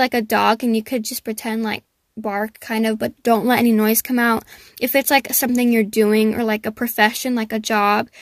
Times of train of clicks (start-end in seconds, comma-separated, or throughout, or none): none